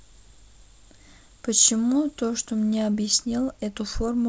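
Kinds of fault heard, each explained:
Nothing to flag here: the speech comes through a G.722 wideband phone link at 64 kbit/s, and no faults turn up along the way.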